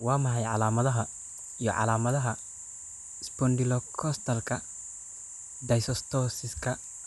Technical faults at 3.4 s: timecode bleed

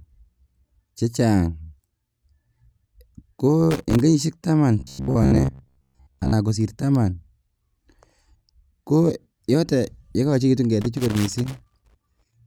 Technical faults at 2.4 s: none

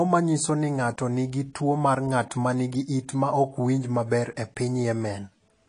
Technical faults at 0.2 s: AAC compression

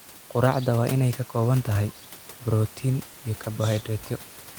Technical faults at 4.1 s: none

